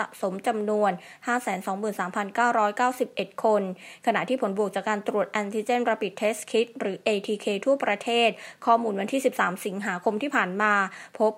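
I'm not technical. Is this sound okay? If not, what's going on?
Yes, it sounds fine.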